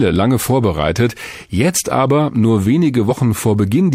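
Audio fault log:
3.07–3.12 s, damaged data in a compressed stream: a short burst of corrupted bytes leaves the decoder unable to read the frames there, so it loses sync and hunts for the next valid header, producing a brief glitch lasting about 50 ms.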